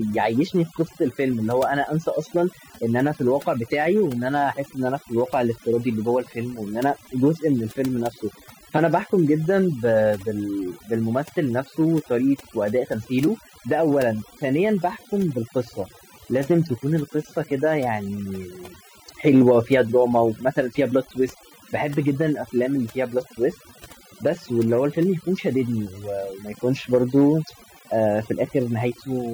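From start to finish there's overdone noise removal: the denoiser clamps bands near its noise estimate, so the background drops to twinkly near-silence.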